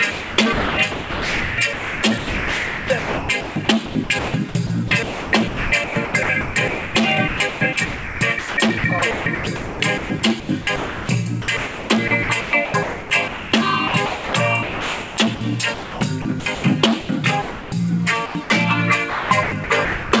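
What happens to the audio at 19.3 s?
Sound chopped by the voice detector, 19.10 to 20.12 s: likely voice-detector gating swaps about 630 ms for comfort noise, so the audio turns choppy with a synthetic background.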